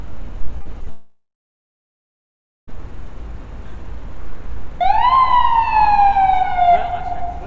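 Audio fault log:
0.58–0.88 s, repeated packet loss (robotic sound): four brief holes, the longest 35 ms, each patched by repeating the preceding sound. The result is a choppy stutter rather than one sustained gap.
0.90–2.82 s, long network dropout: a short fading buzz, then about 1.4 s of silence. Likely about 1.8 s of audio never arrived, so the sound resumes with that stretch missing instead of stuttering.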